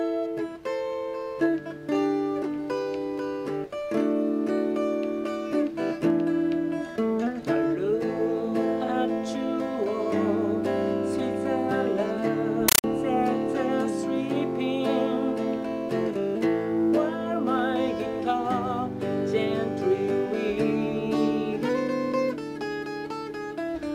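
From 12.68 to 12.84 s, the sound gives way to a compressed stream played as audio: a Dolby Digital (AC-3) bitstream treated as ordinary samples instead of decoded. It is heard as chattering static, with noise bursts of about 9.3 ms repeating at 31.25 Hz.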